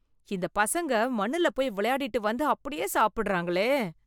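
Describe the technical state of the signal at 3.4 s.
At 3.4 s the speech signal is intact, with no audible fault at that moment.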